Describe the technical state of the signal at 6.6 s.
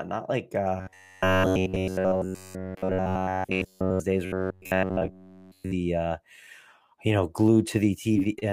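At 6.6 s the speech signal is intact, with no audible technical fault at that moment.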